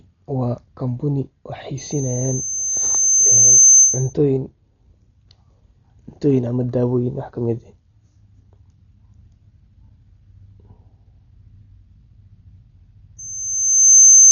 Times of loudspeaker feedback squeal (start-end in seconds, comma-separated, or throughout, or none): 1.77-4.13, 13.18-14.31